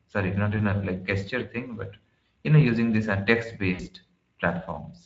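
The whole recording carries Speex codec damage, and it is plainly audible. Speech sounds hoarse and grainy. This is a CELP coder short of bits for the excitation signal, so the fine structure of the voice is replaced by coarse approximation. The bitrate is around 16.8 kbps.

At 0.57 s, just after "sorry not", there is VoIP packet loss concealed by the speech codec. About 20 ms went missing, which fits a single lost frame. The decoder filled the gap by repeating its last pitch and filter. A brief stretched smear is heard, and it lingers to 0.63 s before "a like gesture thing" resumes.

At 3.73 s, after "know using these uh", packet loss concealment happens again. This gap is longer, about 60 ms, which fits three frames. The extrapolated sound stretches out and fades. The voice stays weak and distorted until about 3.87 s, because each concealed frame builds on the last.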